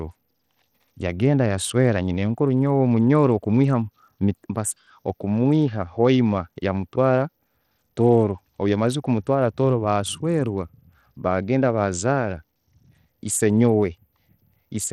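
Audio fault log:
Throughout: Bluetooth SBC compression, likely; the speech has flickering, dropped treble and gritty aliasing, consistent with a starved bit pool near 80 kbps.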